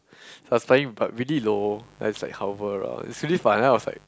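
From 1.33 s to the end of the speech, a mains buzz sits under the recording. It is a steady, raspy buzz, roughly 30 dB below the speech. Its base is 50 Hz. Sharp switching spikes ride on that hum, two in each mains cycle, so the harmonics stack up into the kilohertz range. That points to interference leaking in from a dimmer, a rectifier or a poorly shielded cable. The buzz holds constant once it starts.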